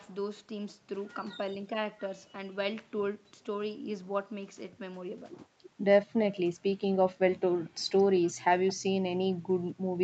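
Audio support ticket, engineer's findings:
Echo leak: faint delayed repeats of the speech at 6.31–6.37 s, 7.65–7.70 s and 8.67–8.74 s, each trailing the original by 221 ms. Level about 25 dB below the speech at 6.31 and 8.67 s, about 35 dB below at 7.65 s. Likely residual loudspeaker pickup at the far end that the echo canceller failed to remove and sent back down the call, which band-limits all content to 8 kHz.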